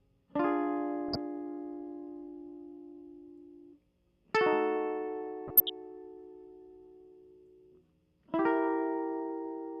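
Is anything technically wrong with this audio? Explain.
Yes. DAB burbling occurs from 1.09 to 1.16 s and again from 5.47 to 5.70 s. Weak reception lets bit errors at a fraction of a percent slip past error correction into the MP2 data. Corrupted samples put short blips of noise in individual sub-bands, and corrupted scale factors make sub-bands jump in level for up to a frame, putting a burbling over the music.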